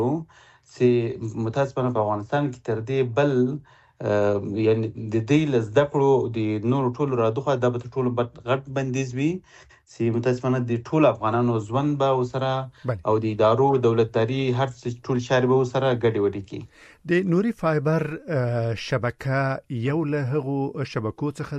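Nothing stood out as a technical problem on listening to this recording.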